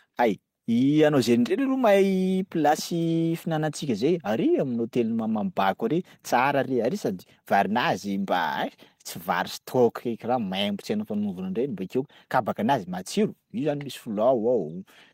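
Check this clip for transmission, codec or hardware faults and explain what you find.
Nothing wrong turns up here; the speech runs along without any transmission, codec or hardware trouble to point to.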